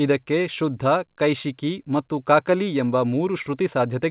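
No technical faults are audible.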